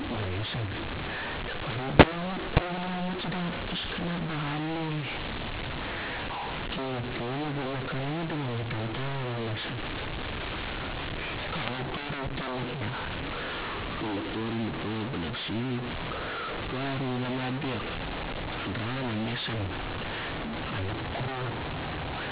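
From start to finish the speech carries a mu-law and A-law mix-up: the telephone audio was coded with mu-law companding but decoded as A-law. The two logarithmic curves map sample codes to different levels, so amplitudes are scrambled, with some peaks swelling and others shrinking, and the quietest samples are lifted well above silence. The result is harsh, grainy distortion on every syllable, and the pauses fill with noise, all within the 4 kHz band of the 8 kHz G.711 path.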